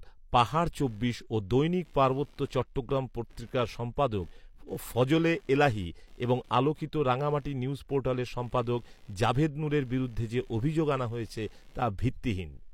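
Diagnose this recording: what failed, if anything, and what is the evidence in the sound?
Computer activity noise in the analogue wiring: from 0.86 s on, a buzz pulsing near 70 Hz sits about 35 dB below the speech. Shifting processor load moves the shared ground, and unlike steady mains hum, the buzz follows the computer's activity rather than the speech.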